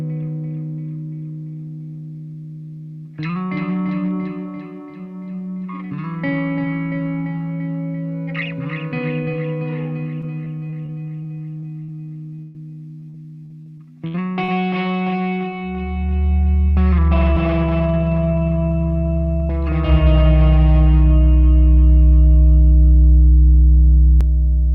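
The audio suffers repeated packet loss (robotic sound) from 10.21 to 11.90 s and again from 13.00 to 14.50 s. Each stretch has seven gaps, the longest 39 ms and 68 ms, patched by extending the previous sound. This gives a choppy texture. On a spectrogram it appears as short smeared blocks of flattened harmonics breaking the normal detail. Between those stretches, a short concealed packet loss at 12.36 to 12.40 s loses about 20 ms. The receiver fills it with a continuation of the last sound, heard as a brief smear or wobble, visible as a thin vertical patch of blurred, repeated spectrum. Immediately after, a burst of packet loss from 12.42 to 12.56 s drops about 120 ms. The last sound is held and faded rather than going silent, so the waveform shows a decaying, repetitive stretch before real audio resumes further on, with the intervening material missing. From 17.37 to 24.21 s the sound is a doubled audio track. 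A second full-band copy runs about as loud as the original and roughly a fifth of a second behind, with no room decay, and it starts and stops abruptly. The likely cause is a second, slower capture path. On a spectrogram every onset appears twice at a fixed horizontal offset.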